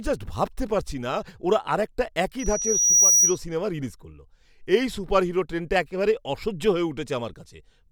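Loudspeaker feedback squeal runs from 2.39 to 3.39 s. The microphone picks up its own loudspeaker, and at 5.8 kHz the loop gain exceeds one, so a single tone swells over most of a second to about 10 dB above the speech.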